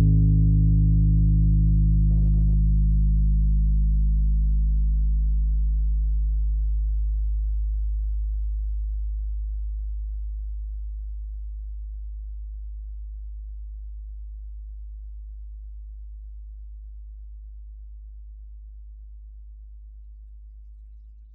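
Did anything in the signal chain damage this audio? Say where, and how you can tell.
No, nothing in these sounds stood out on listening as damage from any stage of the signal chain.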